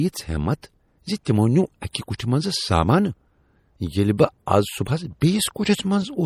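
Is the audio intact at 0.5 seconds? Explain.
No. At 0.5 seconds the speech sounds watery and swirly, with a metallic chirp on s sounds and smeared consonant attacks, and that damage runs through the whole clip rather than a single moment. The likely cause is MP3 compression at a low rate, which fits about 48 kbps. Short of bits, the encoder zeroes weak frequency lines, and they flicker on and off between frames. Content still reaches about 20.4 kHz.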